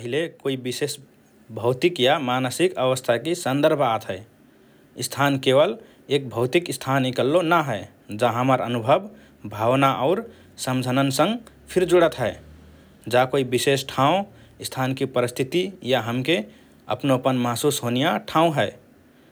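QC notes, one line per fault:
1.02 s, microphone volume stepped up: after "कोइ विशेष", speech and background noise jump together by about 4 dB as the input gain is raised in a single step.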